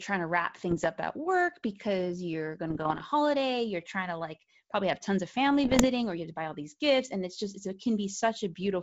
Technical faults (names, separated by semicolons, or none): bit errors on an ADPCM link